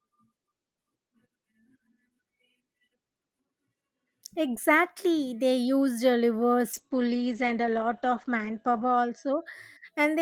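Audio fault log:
6.75–9.51 s, call bitrate drop: the speech turns rough and watery and loses its top end, with the band narrowing to about 8 kHz. The roughness persists for roughly 2.2 s before clarity returns. This points to the encoder being cut from around 32 kbps to about 10 kbps and coding more coarsely. It is unlike packet loss because there are no gaps or glitches, only a steady smearing, set against the ordinary Opus call sound before it.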